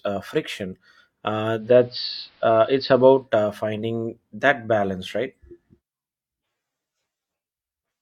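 From 1.55 to 3.29 s the receiver loses digital reception and blends to AM over 173 ms: faint hiss appears, and level shifts about 2 dB.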